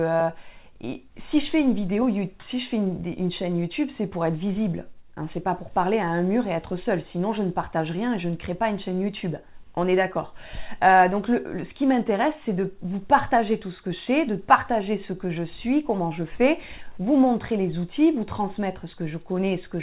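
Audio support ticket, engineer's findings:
No faults found; the call path audible in the clip is band-limited near 4 kHz, consistent with G.711 mu-law at 64 kbps.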